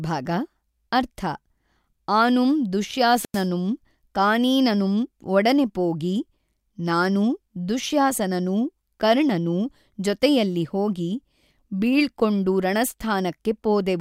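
At 3.09 to 3.47 s there is a wireless microphone squelch dropout. The radio link fades, hiss swells, and then the receiver's squelch mutes the speech for 93 ms before it returns. The rising static before the gap separates it from a clean digital dropout.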